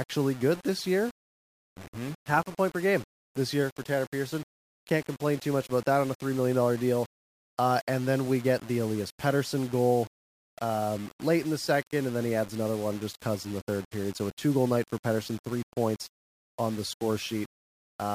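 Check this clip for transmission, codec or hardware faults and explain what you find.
One fault runs through the whole clip: low bit depth without dither. The likely cause is a stage that rounded the samples to very few levels, about what 6-bit rounding would give, with no dither added first. The rounding error tracks the waveform, so the speech carries grainy distortion roughly 20 dB below the signal, harshest in soft passages, while the quietest moments sputter between neighbouring steps or drop to silence.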